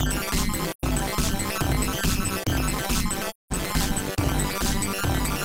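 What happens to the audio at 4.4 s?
At 4.4 s the sound carries a metallic buzz with extra tones around each note, a ripple running around 200 times a second, and it is not a local event: the same overlap-add ripple runs through the whole clip. The audio was split into windowed frames and rejoined with an overlap whose windows do not add up to a steady gain, so the level swings once per frame, dipping by about 60 dB at each trough.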